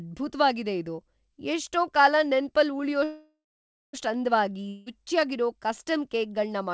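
A call audio freeze runs from 3.04 to 3.95 s. The last sound stretches into a fading buzz, then about 0.54 s of silence, before the audio resumes where it stopped with nothing lost. This is likely a jitter buffer running dry while packets were held up, which adds about 0.89 s of delay.

A long network dropout follows at 4.69 to 4.88 s. A fading buzz covers about 0.17 s, then the audio comes back having skipped about 0.18 s, likely because those packets never arrived. Throughout, the band stops at 8 kHz, which fits a wideband call codec.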